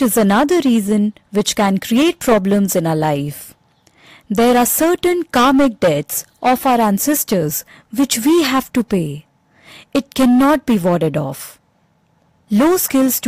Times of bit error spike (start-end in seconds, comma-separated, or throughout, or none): none